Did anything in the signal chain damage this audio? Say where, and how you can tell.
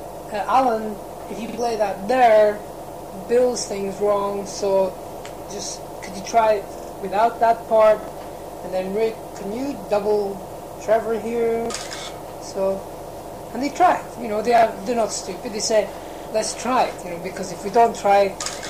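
Yes, there's a repeated buffer problem at the driver or buffer stage. The same 46 ms slice loops with a hard seam at 1.49–1.58 s, 6.78–6.92 s, 8.03–8.08 s, 11.66–11.70 s, 14.58–14.63 s and 16.07–16.25 s, giving a stutter that repeats up to four extra times in the longest one. That slice length fits a 2048-sample buffer. Fresh audio didn't arrive in time, so the device replayed the last block, and up to about two tenths of a second of real material are gone at the worst spots.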